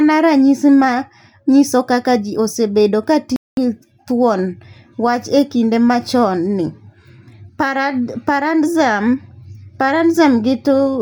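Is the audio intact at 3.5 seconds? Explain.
No. At 3.5 seconds the speech is cut by a playback stall running from 3.36 to 3.57 s, a gap of about 210 ms. The sound stops dead right after "kaka ji osebedo ka" and the output falls silent. It then resumes with "gi thuon". The likely cause is the player running out of data or its thread being blocked, so nothing reached the output until it recovered.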